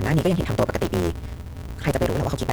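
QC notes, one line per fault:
Throughout: block size mismatch (truncated). One stage hands over bigger blocks than the next one reads, so the tail of every block gets chopped off. That leaves a steady buzz at about 172 Hz, which fits 256-sample reads, and the speech runs about 1.88 times fast while keeping its timbre. Each block plays at normal rate, but the dropped chunks shorten everything.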